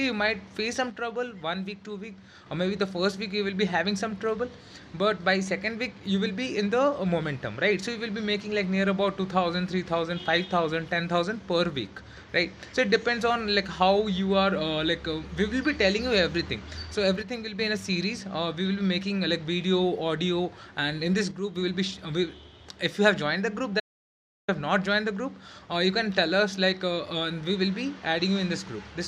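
From 0.90 to 2.46 s, again from 17.22 to 17.59 s and from 21.31 to 21.56 s, the level falls abruptly by about 6 dB and then jumps back. This is most likely one channel drops out: a stereo channel went missing, so after the mono sum the shared content sits at half amplitude. Unlike a true dropout, sound continues through each dip, only quieter, and anything carried solely by that channel vanishes for the moment.

At 23.80 s the audio cuts off completely and returns at 24.48 s, a gap of about 0.68 s. This is an audio dropout to silence, likely from the input being lost while silence kept being written. What separates it from the channel loss earlier is that nothing survives: no room tone, just silence with hard edges, and whatever occurred in that stretch is gone.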